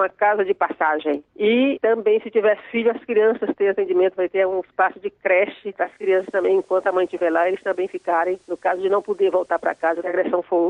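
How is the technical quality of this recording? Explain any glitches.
The recording has one glitch. Digital radio blending to analogue runs from 5.77 to 10.26 s: the receiver loses its digital stream and cross-fades over 360 ms to the station's FM broadcast. The audio drops about 1 dB and picks up hiss roughly 40 dB below the signal until it blends back.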